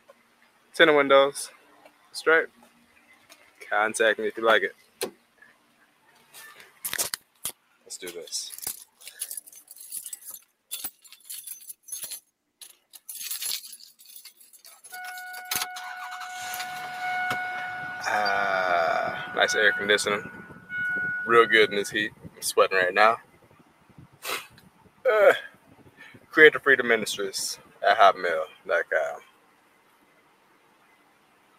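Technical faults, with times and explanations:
Throughout, noise suppressor applied to music or sounds: the level pumps and flutters, held tones sag and tails vanish while sharp onsets stay clear, leaving a thinned, unsteady texture with gain swinging by roughly 15 dB. A suppressor tuned for speech stays active, reads sustained tones, ambience and reverb as background noise, and keeps pulling them down, while transients pass because they look like the signal it protects.
0.00–3.62 s, 4.73–7.87 s, 8.85–14.87 s, 20.46–20.71 s, 22.10–26.33 s and 27.56 s to the end, sound cut by the noise suppressor: in these stretches the steady or decaying parts sink, by about 14, 15, 14, 10, 14 and 15 dB at their deepest, and fading sounds end early. Around three seconds of each of the first, second and fifth spans is affected, about a second and a half in the third, and a brief dip at 20.46 s. Here the suppressor judged the sound to be noise and cut it harder than the rest.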